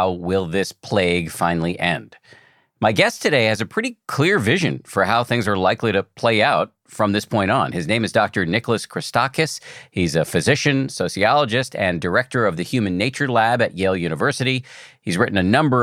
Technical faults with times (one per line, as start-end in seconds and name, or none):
none